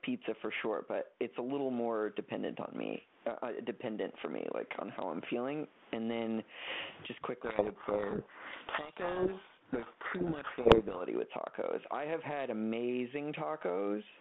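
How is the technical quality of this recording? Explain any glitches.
The recording has two clear faults: constant gain pumping and a stretch of badly distorted speech.

Gain pumping runs throughout. Loud and soft parts end up squashed closer in level, with the gain swinging around 20 dB. A fast limiter is likely fighting far too much microphone gain.

From 7.45 to 11.02 s there is a codec payload misread. Both ends disagree on the bit order of G.726 code words. The speech is buried in harsh distortion until the frames decode correctly again.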